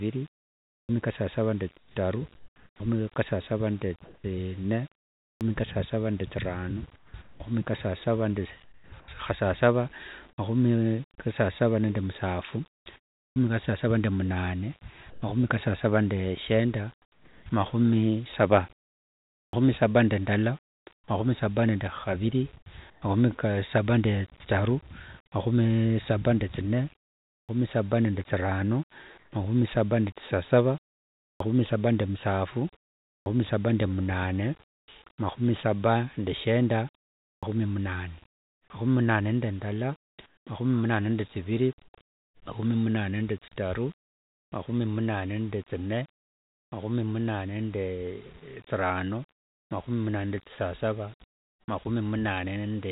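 At 0.82, 5.34, 13.29, 19.46, 27.41, 31.33, 33.19 and 37.36 s (the last right after "mahumi saba nde shenda"), a clipped start after a pause: following each silence of 0.38 to 0.79 s, the output needs time to wake again, so about 66 to 78 ms of onset is swallowed and speech bursts in abruptly. On a waveform, each onset jumps from flat silence straight into speech; a spectrogram shows no build-up, all within a band ending near 4 kHz that fits a G.711 mu-law call path.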